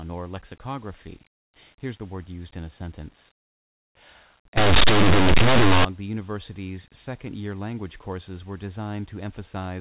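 Linear audio read as companded, from 4.57 to 5.85 s: plain 8-bit samples are decoded as if they were mu-law codes, so values just to one side of zero jump to the largest outputs while their neighbours stay small, producing a loud, harsh distortion.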